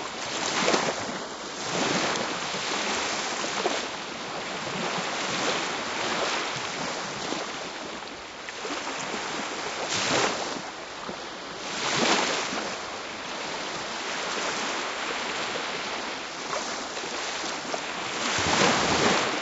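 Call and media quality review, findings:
No faults found in this recording of sounds. Nothing to flag for follow-up on this ticket.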